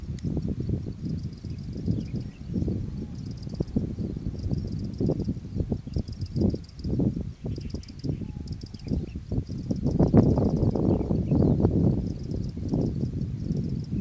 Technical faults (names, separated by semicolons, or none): none